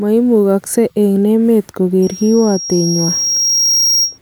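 From 2.02 s to 4.18 s a loudspeaker feedback squeal develops: the microphone re-captures its own loudspeaker, and loop gain above unity at 5.6 kHz lets that single tone grow steadily over about two seconds until it roughly matches the speech level.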